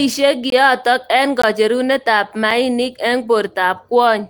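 The speech drops to digital silence at 0.50–0.52 s, 1.42 s and 2.51 s. Each block of digital silence cuts in with no fade. The first two are short holes; the 5 ms one is heard as a tick or dip. The 21 ms gap fits a 1024-sample buffer left unfilled. The 5 ms gap fits a 256-sample one.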